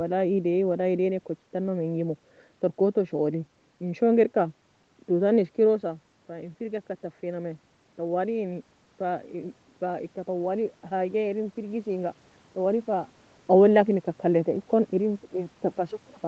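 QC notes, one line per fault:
5.8–13.15 s, automatic gain rising: just after "toue tana" the voice falls away as the talker moves back, cutting the level reaching the microphone by about 10 dB. Over the next several seconds the voice and the room noise climb together as the automatic gain control slowly adds about 6 dB to compensate. The rise ends around the time the talker moves again near 13 s.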